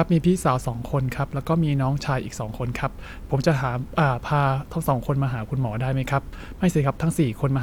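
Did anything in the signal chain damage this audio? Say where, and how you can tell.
No, nothing along the chain from capture to playback has left an audible mark on the signal, which stays continuous and intact throughout the recording.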